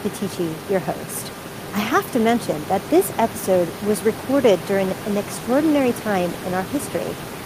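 A speech recording with nothing technically wrong to point at, just the ordinary background of the room sitting about 14 dB under the talking.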